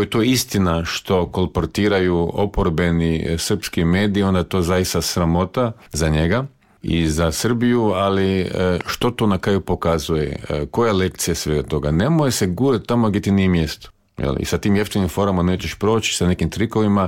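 At 8.81 s a loud pop breaks in, followed by a second before 9.04 s. Both land as sharp thumps, well above the surrounding sound, which carries on underneath. A brief voltage pulse, likely from a plug, switch or static, caused them.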